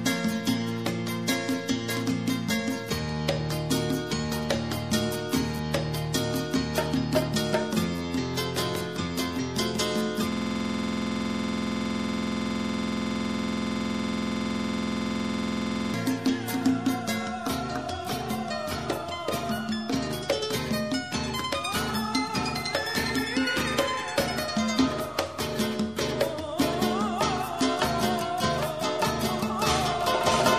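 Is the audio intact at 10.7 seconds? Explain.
No. A system hang loop runs from 10.32 to 15.94 s, covering 10.7 s. The machine or its audio driver stalled while the sound hardware kept replaying the same ring buffer, so one 46.44 ms slice of audio repeats exactly, about 120 times, which fits a 2048-sample buffer. Cycling at 21.5 Hz, the frozen fragment comes across as a hard, rattling buzz in place of the moving sound.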